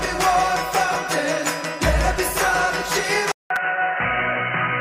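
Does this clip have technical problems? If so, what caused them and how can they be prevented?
Yes. Repeated buffer faults occur at 0.95 s, 2.17 s and 3.56 s. Each replays a tiny chunk, which fits a 5 ms buffer, once, twice and once, respectively. They sound like clicks or a brief buzz. On the waveform, identical short cycles sit side by side with hard joins, and the spectrogram shows thin vertical streaks. A larger buffer or a higher-priority audio thread prevents this.

At 3.32 s the audio goes silent for about 0.19 s. It then continues to the end with nothing above 3 kHz, a level drop of around 5 dB and a new noise floor roughly 55 dB down. This is likely an input switched to a poorer device. The spectrogram shows a gap followed by a flat ceiling at 3 kHz. Locking the input device and disabling automatic headset switching prevents it.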